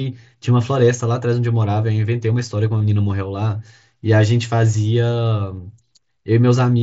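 At 2.79 s and 5.96 s, concealed Bluetooth headset packet loss patches 15 ms and 7.5 ms gaps with repeated recent waveform, leaving a brief buzzy patch with a small warble at the first and a nearly inaudible seam at the second.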